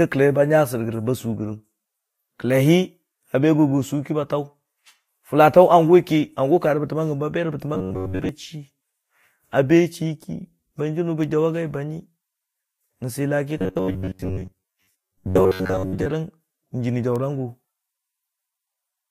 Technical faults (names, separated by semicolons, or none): robotic sound from repeated short buffers